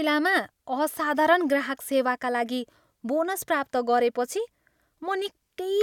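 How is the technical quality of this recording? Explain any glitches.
The recording's signal path holds together with no audible glitches, so there is nothing to explain.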